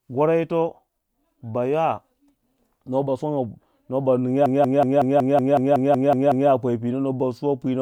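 A speech clip with a system hang loop from 4.46 s to 6.50 s: one 186 ms slice of audio repeats about eleven times at 5.38 Hz, giving a machine-gun stutter. The machine or driver stalled while the audio hardware kept replaying the same ring buffer. The loop length fits an 8192-sample buffer at 44.1 kHz. Playback resumes at 6.50 s with essentially nothing skipped.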